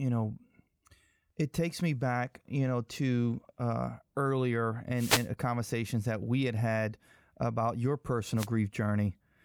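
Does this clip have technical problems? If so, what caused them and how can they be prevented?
Yes. Two wireless microphone noise hits break through the speech, from 4.94 to 5.29 s and from 8.36 to 8.48 s. Each is a brief swish of static. The FM radio signal faded as reflections cancelled, letting receiver noise rise. Diversity receivers and clear antenna lines prevent this.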